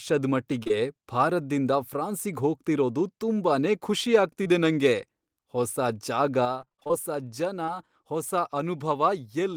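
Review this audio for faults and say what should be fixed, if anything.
Short concealed packet loss shows up at 0.63 to 0.71 s as two back-to-back dropouts, then at 4.43 to 4.47 s and 7.66 to 7.69 s. Each is about 20 ms of missing audio, patched by stretching the preceding sound, so you hear a quick smear or wobble. A bigger jitter buffer or better network path would keep these from happening.

The sudden gain jump hits at 6.45 s, where level and background noise drop together by about 6 dB and stay down to the end. It's likely a gain setting applied in one step with no ramp. Smoothing gain changes over a few milliseconds would fix that.

Repeated packet loss (robotic sound) runs from 6.61 to 6.91 s. It's a burst of about eight short holes, the longest about 21 ms, with nearly half that stretch filled in by concealment. It sounds choppy, with pieces missing. Fixing the congestion or loss on the link would keep this from happening, and so would adding forward error correction.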